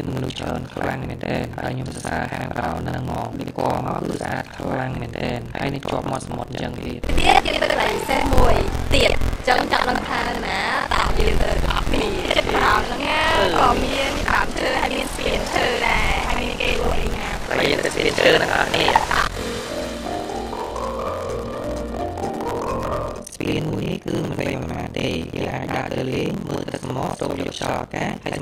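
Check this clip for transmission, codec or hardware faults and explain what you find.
One fault is present: buffer tearing runs throughout the clip. Writer and reader pointers have slipped, so roughly half of each 43.1 Hz period, which fits a 1024-sample buffer, replays audio about 70 ms old, giving a robotic buzz whenever sound is present.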